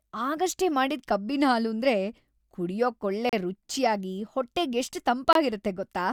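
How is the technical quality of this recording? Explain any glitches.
The speech is cut by two short, hard-edged dropouts into silence. The first runs from 3.29 to 3.33 s, just before "ರುಚ್ಯಾಗಿ ಹೊಟ್ಟೆಗೆಷ್ಟ್". The second runs from 5.33 to 5.35 s, right after "ಕುಡ್ಯೋಕೊಳ್ಳೆ ರುಚ್ಯಾಗಿ ಹೊಟ್ಟೆಗೆಷ್ಟ್". Both are a gap between stream segments. The segments are 2 s long, and their time stamps leave holes of about 35 ms and 24 ms that the player fills with silence. Nothing is lost; the sound simply pauses and resumes.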